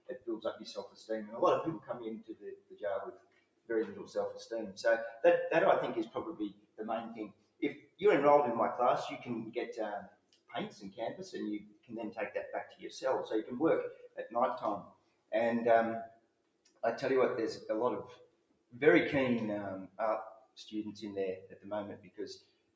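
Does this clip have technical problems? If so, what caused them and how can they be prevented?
Yes. A noise suppressor applied to music or sounds stays active throughout. Held tones and tails are mistaken for noise, so the level pumps by around 20 dB. Unlike a compressor, it turns down steady material rather than loud material. Turning off speech noise suppression for non-speech audio prevents this.

Sound cut by the noise suppressor occurs at 0.0–4.15, 6.51–8.01, 10.06–12.85, 13.94–16.83, 18.15–18.75, 19.88–20.57 and 21.5–22.76 s. Sustained parts sink by up to about 18 dB while onsets survive, which distinguishes it from a plain fade. Disabling the suppressor for this content prevents it.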